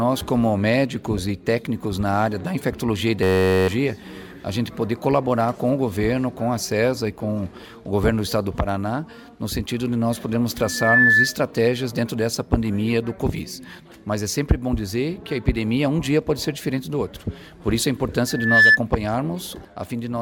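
At 3.23 s the audio locks into a system hang loop. A 10.67 ms slice repeats exactly until 3.68 s, so you get a steady buzz at about 93.8 Hz instead of content. That's the hardware cycling through the same ring buffer while the driver or machine stalls, and the loop length fits a 512-sample buffer. Roughly half a second of real audio goes missing there. Then there are two bouts of loudspeaker feedback squeal, from 10.63 to 11.36 s and from 18.27 to 18.79 s. Both times a single 1.7 kHz tone swells up over about a third of a second and ends up around 10 dB louder than the rest of the sound. That's the mic hearing its own speaker, with loop gain above one at that frequency, so the tone keeps feeding itself until the loop is broken.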